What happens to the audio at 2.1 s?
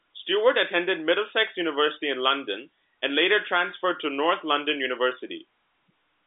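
Nothing goes wrong at 2.1 s: the speech carries on intact there, heard through the ordinary G.711 telephone band, which stops short of about 3.8 kHz.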